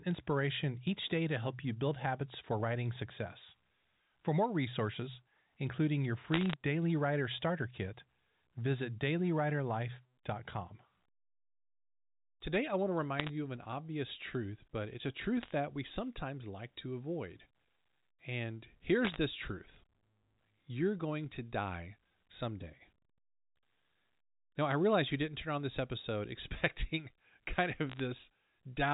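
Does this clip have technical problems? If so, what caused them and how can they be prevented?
Yes, there are bit errors on a digital phone line. You get brief bursts of sharp ticking crackle over the speech at 6.34–6.54, 13.18–13.29, 15.41–15.51, 19.05–19.16 and 27.90–28.00 s. Each flipped bit corrupts a single sample. A cleaner line or error-protected transmission would prevent it.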